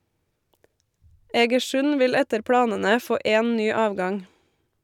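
No technical faults can be heard anywhere in the speech. There is no moment in the recording that calls for a time stamp or an explanation.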